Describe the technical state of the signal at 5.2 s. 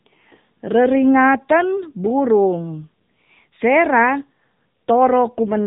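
At 5.2 s the speech is still passing through the AMR narrowband mobile codec, as it does for the whole clip. The sound is cut off sharply at 3.8 kHz, so it is thin and boxy. The codec rebuilds the voice from a simple vocal-tract model excited by sparse pulses in short sub-frames. The damage is plainly audible: a buzzy, synthetic edge that fits the 7.95 kbps AMR-NB mode.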